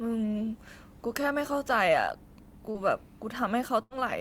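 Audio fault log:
2.71–2.78 s, short concealed packet loss: about 40 ms of the call arrived too late, and the receiver extended the preceding sound over the hole, leaving a brief smear.
3.83–3.93 s, burst of packet loss: roughly 80 ms of consecutive audio never arrived, so the receiver stretched and faded the last sound into a held buzz or hiss before the audio resumes further on.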